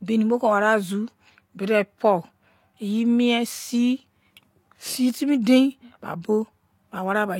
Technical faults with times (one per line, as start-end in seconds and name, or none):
0.00-7.39 transcoding between lossy codecs